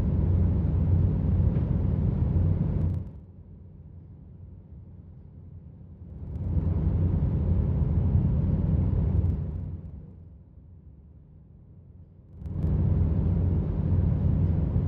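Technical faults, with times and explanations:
2.82–3.24 s, 5.97–6.66 s, 9.13–10.37 s and 12.29–12.67 s, zipper noise: four level moves (down by about 20 dB, up about 20 dB, down about 25 dB, up about 25 dB) are made in unsmoothed jumps of about 2, 1, 1 and 3 dB, roughly twenty times a second. Each jump clicks, so a fast ticking rides on the sound while the level moves. On the waveform the envelope looks like a staircase. On the spectrogram each step shows as a faint vertical line.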